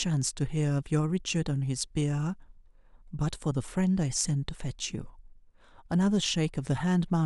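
Nothing here trips the ear at any point, with no technical faults turning up anywhere in the recording.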